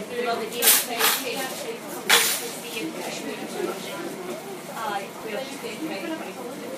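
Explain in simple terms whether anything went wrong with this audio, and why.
Something did go wrong: there's a regular click, about four of them, every 1.7 seconds from 0.13 s to about 5.2 s. That steady rhythm points to clock drift buffer slips. Two devices likely ran on clocks that differ by around 200 parts per million, so every so often a tiny chunk of samples got dropped or repeated.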